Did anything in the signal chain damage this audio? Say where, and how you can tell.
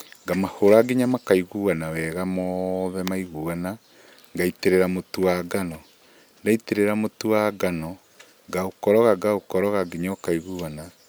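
No, nothing in the signal chain audibly damaged this speech.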